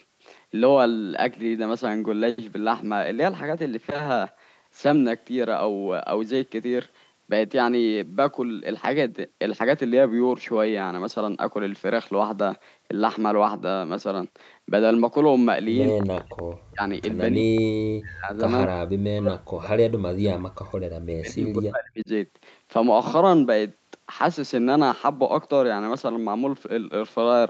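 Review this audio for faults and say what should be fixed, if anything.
Speech suppressed in double talk: the speech drops out at 15.94–16.39, 16.7–16.82, 17.32–17.52, 17.88–18.39, 18.65–20.75 and 21.04–22.09 s, mostly by around 40 dB and by about 25 dB at 17.32 s. The likely cause is an echo canceller that could not separate near-end talk from loudspeaker echo while both sides spoke, so it attenuated both. Prevent it with better double-talk detection and a less aggressive residual echo suppressor.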